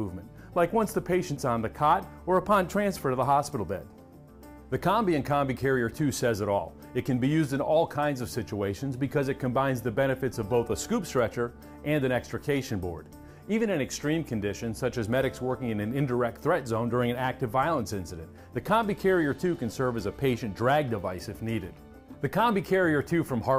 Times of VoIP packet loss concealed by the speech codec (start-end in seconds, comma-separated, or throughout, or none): none